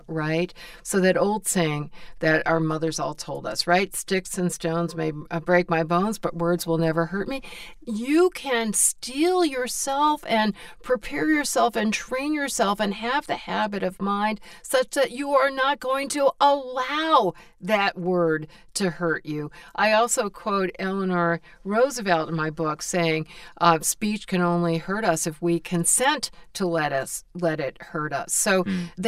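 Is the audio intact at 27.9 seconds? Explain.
No, at 27.9 seconds the speech still has the channel delay (comb filtering) that runs through the whole clip. One channel lags the other by around 5 ms, and when the two are summed to mono the shared content cancels at evenly spaced frequencies, with the first notch around 100 Hz and more stacked above it. That fixed set of holes in the spectrum gives the speech a hollow, phasey colour right at that point.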